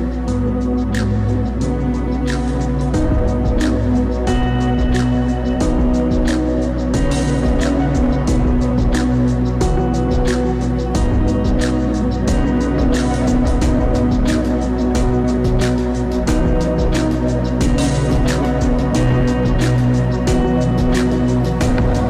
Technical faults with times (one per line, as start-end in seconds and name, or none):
0.00-22.09 mains hum
0.00-22.09 hard clipping